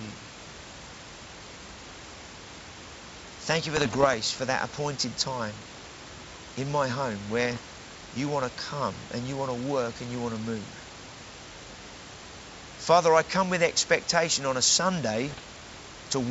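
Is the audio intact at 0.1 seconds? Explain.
Yes, at 0.1 seconds the audio is intact, with no fault at that moment.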